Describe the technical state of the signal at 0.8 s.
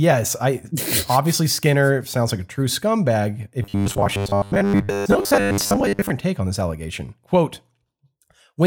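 At 0.8 s the speech signal is intact, with no audible technical fault at that moment.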